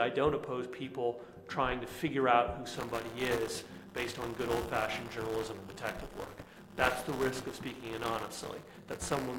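From 2.73 s to 9.38 s there is buffer tearing: writer and reader of the ring buffer have slipped, so roughly a tenth of each 5 ms period carries audio about 20 ms old. That gives a steady 200 Hz rattle that follows the signal, unlike underrun clicks or silent gaps.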